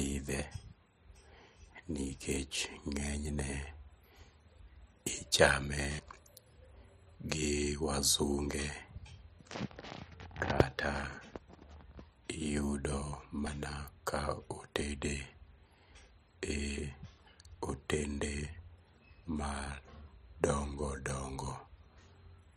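At 5.99 s and again at 13.47 s the speech jumps forward, losing about a tenth of a second each time with no gap in between. This points to a dropped buffer (overrun), likely caused by the recording software not collecting a block of samples before the hardware overwrote it. Unlike a dropout, no silence fills the hole: the audio on either side is spliced straight together.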